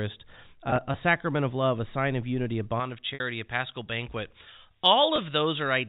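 Right at the start, from 0.70 to 0.94 s, just before "sacrament of love a", there's packet loss with pitch repetition. About 60 ms went missing, spread across that 240 ms stretch in bits no longer than 20 ms, which fits three lost 20 ms packets. Each gap got patched by repeating the last pitch period, so you hear brief buzzy little holds rather than dropouts.

From 2.80 s, right after "sign of unity a", to the end, the pre-emphasis was left on. The treble boost, which looks like a J.17 curve, never got its matching cut, so 10 kHz sits about 11 dB hot relative to 1 kHz. That's why the back half sounds thin, bright and hissy on the sibilants.

Two more packet-loss spots land inside that bright section. The first, from 3.14 to 3.20 s, loses about 60 ms, consistent with three consecutive packets, so the repeated pitch period is held long enough to fade out audibly before the sound cross-fades back in. 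The second, from 5.16 to 5.18 s, is a single 20 ms loss that comes through as a quick buzzy catch.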